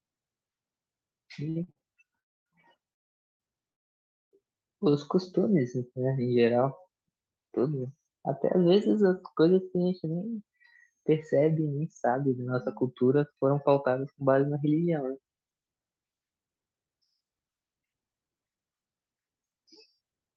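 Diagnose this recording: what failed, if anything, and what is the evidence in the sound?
The network and the receiver's jitter buffer are at fault. Three short stalls from a late packet occur at 1.49 to 1.58 s, 1.64 to 1.69 s and 1.71 to 1.78 s. Each holds the last sound for 39 to 62 ms. A packet arrived late, the buffer ran dry, and playback resumed with nothing lost.

Three call audio freezes follow at 2.20 to 2.48 s, 2.92 to 3.42 s and 3.72 to 4.33 s. Each is almost entirely silence, lasting 260, 470 and 590 ms. The speech then resumes where it stopped. The likely cause is packets held up in transit, leaving the jitter buffer empty.

A jitter buffer speed-up runs from 10.06 s to 20.34 s. The speech plays at about 111% speed with unchanged pitch, so it sounds hurried. The buffer had built up excess delay. The receiver trimmed small pitch-period slices, roughly a second in total.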